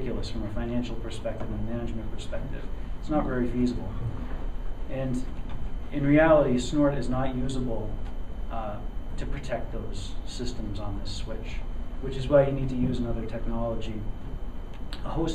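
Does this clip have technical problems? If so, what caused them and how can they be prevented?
No, nothing in this clip stood out as a technical problem on listening.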